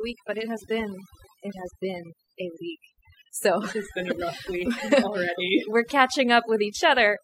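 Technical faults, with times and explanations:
Throughout: overdone noise removal. The background drops and is dotted with twinkling specks, because aggressive denoising gated bands near the noise estimate.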